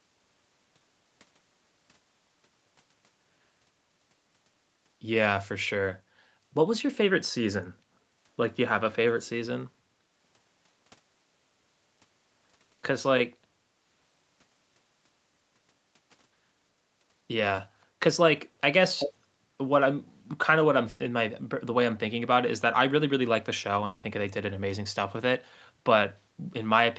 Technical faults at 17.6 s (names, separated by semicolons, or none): short concealed packet loss